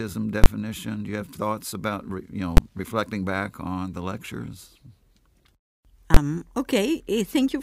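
Three loud bangs cut through this speech clip, at 0.44 to 0.46 s, at 2.57 s between "thoughts about re you" and "reflecting back on the", and at 6.14 to 6.17 s. These are invalid numbers at full scale: a calculation produced infinite or invalid values that were replaced by an extreme level, so the signal sits flat, far beyond the speech's peaks, for one processing block. The roughly 21 ms events fit a 1024-sample block, and the 10.7 ms one fits a 512-sample block.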